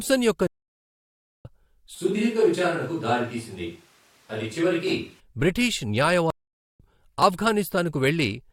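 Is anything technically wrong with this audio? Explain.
Yes, this speech clip has two kinds of fault.

Stream reconnect, twice: from 0.47 to 1.45 s the sound drops to about 0.97 s of silence, and from 6.30 to 6.80 s to about 0.48 s. Each time the connection broke and the player restarted its decoder mid-stream, so speech resumes roughly half a second and roughly 0.4 s further on. Unlike a brief packet-loss dropout, the gap is long and fully silent, and the speech jumps ahead rather than continuing where it stopped.

Switch to a distant microphone, from 1.95 to 5.20 s: the speech abruptly turns roomy and hollow with thinner bass, drops about 5 dB in level, and room noise rises to about 35 dB below the speech. The likely cause is that the close microphone's signal was lost and a farther one took over. A simple EQ change would alter tone alone, but here the added room reflections and noise floor arrive and leave together, with sudden changes at both ends.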